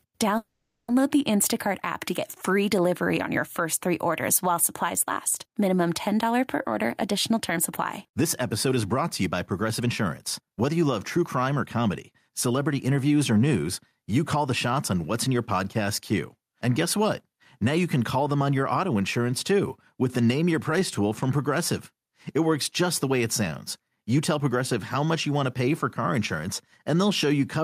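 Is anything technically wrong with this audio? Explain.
Yes, there are three kinds of fault in this speech.

Gain pumping runs through the whole clip. The background swells in each pause and ducks by about 5 dB under every loud syllable, which is likely from gain set far too high with a fast limiter clamping it. On a waveform the envelope looks flattened, and the noise floor rises visibly between phrases.

A call audio freeze occurs from 0.37 to 0.91 s. Delayed packets left the receiver with nothing to play, so it stretched the last sound into a fading buzz for about half a second, including roughly 0.11 s of silence, before resuming where it stopped. That is the likely cause. A spectrogram shows smeared, static bands and then a blank strip.

Jitter buffer speed-up occurs at 6.83 to 7.59 s (109% speed), 8.08 to 9.89 s (112%) and 10.41 to 12.51 s (110%), ending just before "interviews or news you". 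To shrink an overfilled buffer, the receiver cut out short pitch-period slices, totalling under a tenth of a second in the first stretch and about a fifth of a second in each later one. The speech sounds hurried at an unchanged pitch. On the waveform, the syllables sit more tightly packed.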